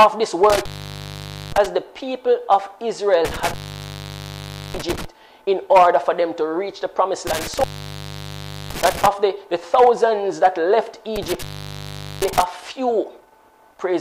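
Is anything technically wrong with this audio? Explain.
Yes. Intermittent contact occurs four times, at 0.50–1.66, 3.25–5.05, 7.27–9.07 and 11.16–12.43 s, as a loose connection opens for 0.87, 1.19, 1.07 and 0.79 s. Unlike a clean digital dropout, each cut carries crackle at its edges, with faint hiss through the gap.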